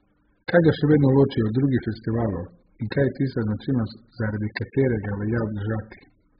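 Throughout, the speech sounds dull, smeared and warbly, with nothing above 5 kHz. This is likely heavy AAC compression, fitting a bitrate near 8 kbps.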